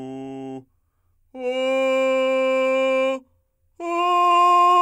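It's a short bit of music, and nothing technical stands out as wrong with it anywhere.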